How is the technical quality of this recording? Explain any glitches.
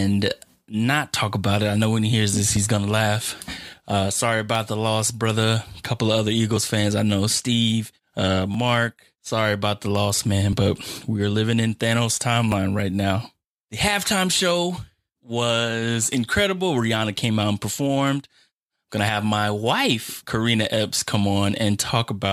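There's one recurring glitch: an overlap between stream segments. Tiny skips land at 2.57 s (after "when he hears this"), 4.55, 6.57, 8.54, 10.53 (after "about the loss man") and 12.52 s, about every 2 seconds. At each segment boundary, roughly 6 to 18 ms of real audio gets trimmed as if duplicated, so the waveform jumps.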